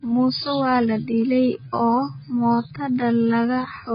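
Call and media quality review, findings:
Whole clip: speech band-limited, nothing above 5 kHz, dull and smeared, fizzy warble on sibilants and sustained vowels. Likely AAC compression, AAC-LC at a very low bitrate; heavy quantisation empties upper bands and leaves spectral holes.

From 1.0 s to end: pace drops abruptly to about 0.7x with pitch unchanged, speech drags. Likely a time-stretched section; pitch-preserving stretch repeats short segments to lengthen the audio.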